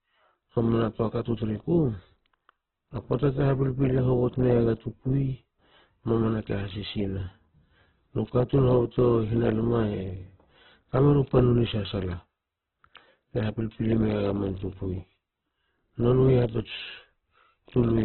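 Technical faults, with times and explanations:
Throughout, Opus compression: the speech sounds narrow and boxy, with nothing above 4.2 kHz, and its tones turn rough, grainy and noisy rather than swirling. This is likely Opus in CELT mode starved of bits, filling bands with noise or folded energy, which fits roughly 8 kbps.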